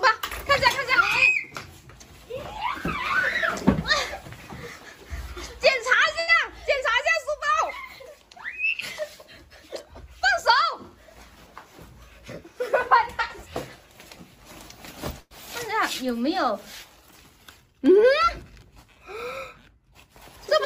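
At 6.19 to 6.31 s a short stall from a late packet holds the sound for 84 ms with a faint buzz or dip. Nothing is lost, unlike a dropout, and the audio resumes exactly where it paused.

From 11.14 to 12.42 s a jitter buffer speed-up plays the audio at 106% speed, trimming about a tenth of a second. The pitch stays the same, so it sounds hurried rather than higher.

At 15.20 to 15.34 s a call audio freeze adds a 106 ms gap: a fading buzz or hiss that ends in about 20 ms of silence before the audio resumes. It is longer than the earlier stall, and the likely cause is delayed packets draining the buffer.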